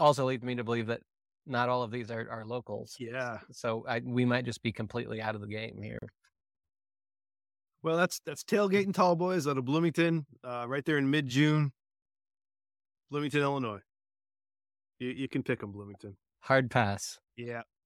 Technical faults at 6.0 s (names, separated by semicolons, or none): gap at a join of encoded pieces